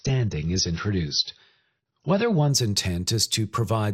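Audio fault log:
0.00 to 2.50 s, adaptive stream starting at a low bitrate: the speech opens dull and smeared, with nothing above 6.6 kHz and a grainy, swirling edge, which fits a low-rate AAC rendition of around 24 kbit/s. At 2.50 s the treble and clarity return at once, suggesting a step up to roughly 96 kbit/s. Unlike a fixed low-pass filter or a dropout, the quality jumps mid-stream without any silence or glitch at the switch.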